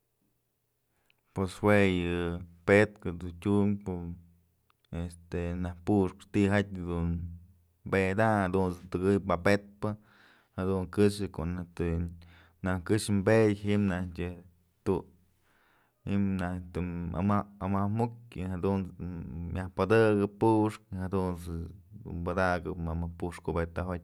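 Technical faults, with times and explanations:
No technical faults are audible anywhere in the speech recording.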